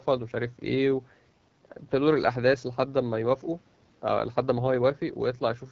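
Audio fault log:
Throughout: AMR wideband (HD Voice) codec. The speech has a rough, raspy edge and plainly audible coding damage, with nothing above 7.5 kHz. AMR-WB models the voice as pulses driving a vocal-tract filter up to 6.4 kHz and fills the band above that with shaped noise. At its lowest rates that model is too coarse, and the rasp points to a low setting around 8.85 kbit/s.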